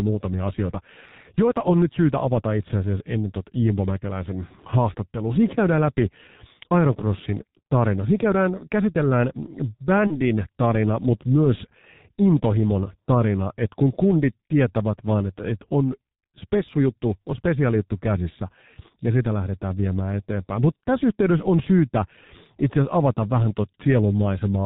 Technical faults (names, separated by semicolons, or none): G.723.1 codec; VoIP packet loss concealed by the speech codec